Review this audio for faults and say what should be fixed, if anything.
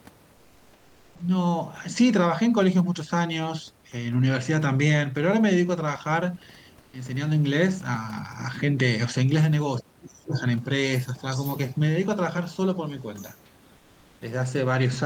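Comfort noise in place of the background, at 0.33 to 1.19 s, 6.81 to 6.93 s and 13.77 to 14.21 s: the sender likely stopped transmitting during pauses, which points to Opus-style discontinuous transmission. The receiver filled the gaps with synthetic noise, so the real room background becomes a flat, featureless hiss about 2 to 3 dB quieter. To prevent it, disable DTX or improve the comfort-noise model so it matches the real background more closely.

Onset clipped by the voice detector, at 1.15 to 1.19 s: the voice detector likely reacted late when sound resumed after the first pause, so 40 ms at the start was never sent. Comfort noise fills that slot, and the sound begins abruptly without its soft attack. To prevent it, give the voice detector a shorter attack time or a look-ahead so onsets are transmitted.

Speech suppressed in double talk, from 9.8 to 10.36 s: with both sides talking at once, the echo canceller likely could not tell the local talker from the loudspeaker echo and attenuated everything. 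Over roughly half a second the speech dips sharply, at its deepest by something like 40 dB. To prevent it, tune the double-talk detector so the canceller holds back its suppression while the local talker is active.

Other side's voice leaking through, at 10.33 to 10.41 s, 10.58 to 10.64 s, 11.15 to 11.78 s and 12.86 to 13.41 s: the echo canceller likely left part of the loudspeaker signal in the microphone feed. A second voice comes through in scraps and longer stretches, from roughly 15 dB below the talker down to nearly inaudible. To prevent it, improve echo-path adaptation and residual echo suppression, or use a headset in place of the loudspeaker.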